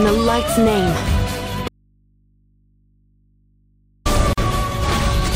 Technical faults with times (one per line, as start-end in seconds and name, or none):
1.68-4.05 audio dropout to a faint residue
4.33-4.38 gap at a join of encoded pieces